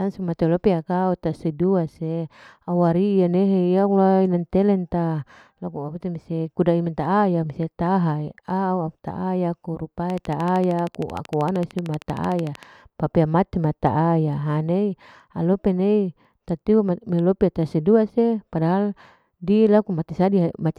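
From 10.10 s to 12.64 s a steady ticking rides over the speech, a train of clicks at a regular 13.1 per second, around thirty in all. Each click has much the same sharp shape, and they stand a few decibels above the speech, so they cut through and stay audible between syllables. The even spacing and uniform pulses point to a likely cause in electrical interference from nearby equipment or a faulty connection or power supply.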